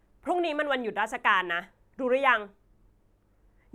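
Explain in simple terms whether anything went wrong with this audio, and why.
Nothing went wrong; there's no fault to hear.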